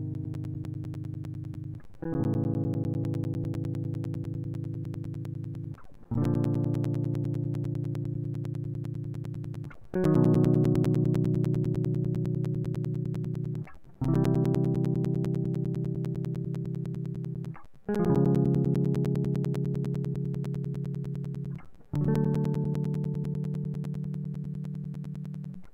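From about 0.14 s right through to 25.65 s, the music is peppered with periodic USB or driver dropouts: a tiny gap every 0.1 s, so ten a second, each around 10 ms long and filled with silence. Something's stalling the bus or the audio driver on a fixed cycle, and each stall punches a little hole in the stream. You hear it as a steady ticking or popping riding on the music, present wherever there's signal.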